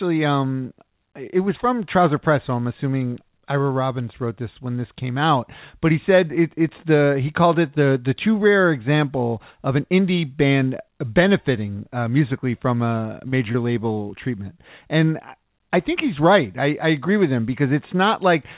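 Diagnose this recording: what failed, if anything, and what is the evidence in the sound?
Brief smears and wobbles at 13.28–13.34, 13.52–13.56 and 13.94–13.98 s, after "uh musically from a" and before "treatment and I think", are short concealed packet loss: network packets arrived too late, and the decoder filled 20–40 ms gaps by extending the preceding sound.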